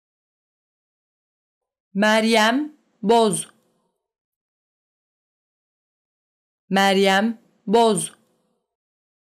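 From 7.74 to 7.92 s, the signal briefly exceeds what one stage in the chain can pass, overdriving it by about 2 dB, so the loudest peaks are sliced off flat. This is hard clipping. The squared-off tops add harmonics high up the spectrum that were never in the sound. Because the overload is small and lasts under a fifth of a second, it is heard as a short crackle or gritty edge on those peaks.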